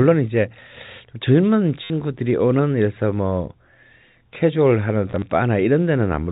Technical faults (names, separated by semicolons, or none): packet loss with last packet repeated